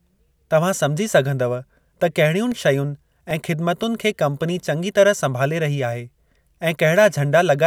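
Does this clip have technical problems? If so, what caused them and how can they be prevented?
Yes. Six CD scratch ticks, the longest about 3 ms, recur between 2.52 and 3.83 s. A scratch defeated error correction once per disc turn. Clean or resurface the disc and use secure ripping.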